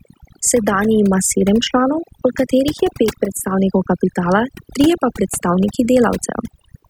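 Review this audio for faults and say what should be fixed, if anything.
Overdone noise removal runs through the whole take, start to finish. The denoiser was pushed hard enough that any frequency band sitting close to its noise estimate gets clamped down or shut off, and the softer parts of the speech get caught in that too. So the gaps between phrases fall to near silence with little twinkly specks. Next time, back the reduction amount off and let a bit of the room noise stay in.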